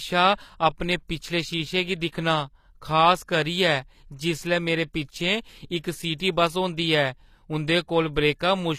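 Throughout the speech, the treble has a gritty, metallic sheen. Sibilants sound lispy, and nothing is present above 14.9 kHz. This is likely HE-AAC compression at a low bitrate, around 24 kbps, with band replication rebuilding the upper spectrum from copied lower bands.

From 6.17 to 6.20 s, a brief hiss of about 31 ms precedes an attack, which lands soft and smeared. This pre-echo comes from the codec spreading quantisation noise across its transform block, so noise sized for the loud onset also fills the quiet moment before it.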